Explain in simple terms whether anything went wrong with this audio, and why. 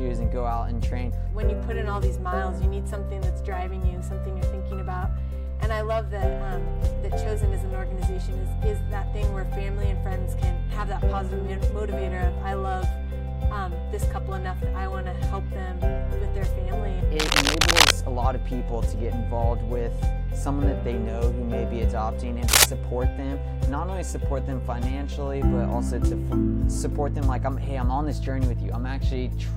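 Yes: two bursts of cable scratch noise, a rough scratching from about 17.19 to 17.91 s and a shorter, louder one at 22.47 to 22.65 s, both louder than the sound. Likely a worn lead or plug being moved, and unlike a single click, it rustles unevenly for a moment.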